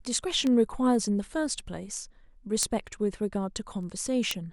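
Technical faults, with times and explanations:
0.23–4.31 s, word clock ticks: about twenty ticks, roughly five per second, each a one-sample slip as an unlocked receiving clock drifts around 100 ppm.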